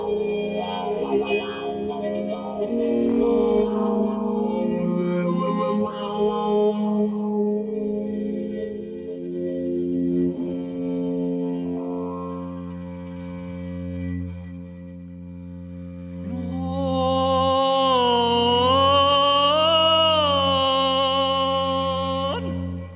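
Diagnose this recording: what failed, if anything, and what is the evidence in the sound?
Nothing in the recording points to a failure at any stage of the chain. There is no audible evidence to tie to a stage, a time or a mechanism.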